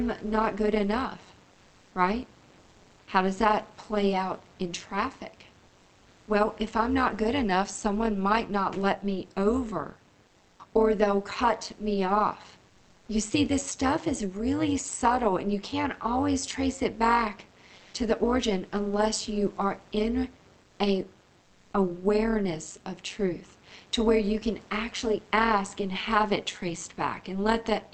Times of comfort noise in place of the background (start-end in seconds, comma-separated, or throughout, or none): 1.51-1.91, 2.59-3.07, 5.67-6.27, 10.27-10.59, 12.69-13.07, 17.75-17.93, 20.63-20.79, 21.41-21.73